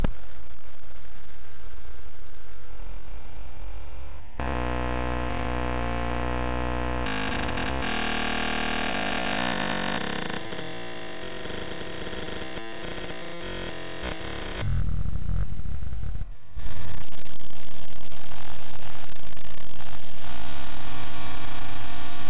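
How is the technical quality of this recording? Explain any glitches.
Nothing stood out on listening to this recording of everyday sounds, which comes through a telephone-style call path with nothing above 4 kHz.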